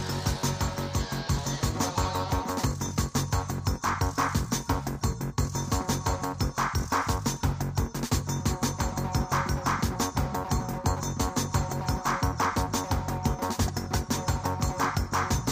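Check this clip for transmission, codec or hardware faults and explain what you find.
I find no faults to explain in this clip.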